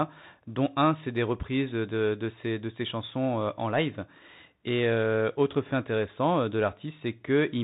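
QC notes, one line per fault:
Throughout, Bluetooth CVSD headset codec: the speech is squeezed below 4 kHz, with scratchy s sounds and grainy hiss from a one-bit delta coder, likely a 64 kbps link.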